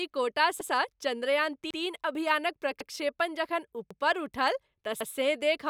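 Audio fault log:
0.61–0.71, 1.71–1.81, 2.81–2.91, 3.91–4.01 and 5.01–5.11 s, overlapping chunks: a stutter at each join as 100 ms replays, because every 1.0 s chunk begins before the previous one ended.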